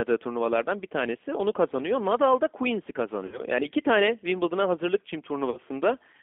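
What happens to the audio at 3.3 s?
About 60 ms of VoIP packets were lost, roughly what three 20 ms packets would carry, and the G.729 decoder covered the gap with packet loss concealment from its last pitch and filter, fading gain each frame. From about 3.26 to 3.41 s the speech smears into a fading buzzy tone or coloured noise. Because each frame builds on the last, the weakened, distorted speech persists past the gap itself.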